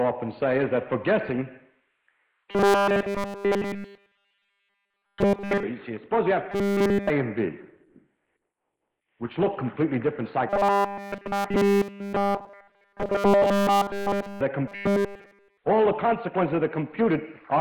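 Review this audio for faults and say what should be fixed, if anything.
Robotic sound from repeated short buffers at 2.51 to 5.63 s, 6.52 to 7.10 s, 10.49 to 14.41 s and 14.67 to 15.57 s: the sound becomes a rigid, metallic buzz at 200 Hz throughout each stretch. The likely cause is new audio arriving too late, so playback loops a 5 ms fragment while real audio is skipped. To prevent it, enlarge the receive buffer and keep the delivery path from stalling.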